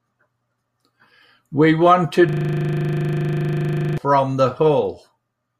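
From 2.29 s to 3.98 s the speech halts in a system hang loop: the playback stalled while the audio hardware kept replaying one 40 ms stretch of its buffer, repeating it about 42 times. The result is a rigid, rattling buzz at 25 Hz.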